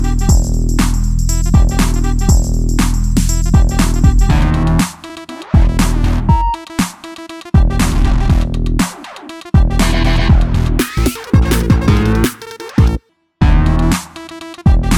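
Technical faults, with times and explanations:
10.79 to 13.09 s, wrong sample rate: The sound abruptly becomes faster and higher, running about 1.38 times normal speed and about 5.55 semitones sharp. Speed and pitch rise together, which fits 32 kHz material played at 44.1 kHz without conversion.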